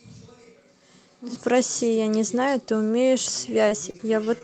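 From the start until 1.35 s, the close microphone's feed has likely dropped out, leaving a distant microphone: the speech sounds hollow and roomy, about 10 dB quieter, with audible background noise. From 3.49 to 4.43 s, repeated packet loss leaves six short holes, the longest 30 ms, each patched by stretching the previous sound, so the speech turns choppy, with pieces missing.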